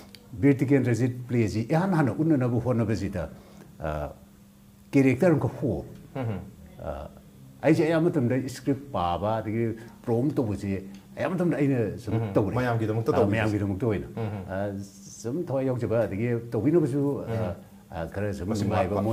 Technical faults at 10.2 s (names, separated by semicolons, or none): none